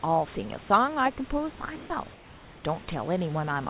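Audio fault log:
0.68–0.70 s and 1.58–1.60 s, sound dropped by the voice detector: twice, a 20 ms sliver of the speech gives way to a flat hiss, then the speech resumes. About 20 ms of real sound is lost at the first point and about 10 ms at the second. The sender's voice detector likely judged these quiet moments to be background, stopped sending, and the receiver filled each gap with synthetic comfort noise.
1.76–1.90 s, comfort noise in place of the background: for 140 ms the room background, which sits about 22 dB below the loudest speech, turns into a smooth, featureless hiss about 3 dB different in level. It lacks the texture of the real room noise, and the 4 kHz-limited G.711 call sound lies on either side. This is likely discontinuous transmission: the sender paused during no-speech, and the receiver generated stand-in noise modelled on the background.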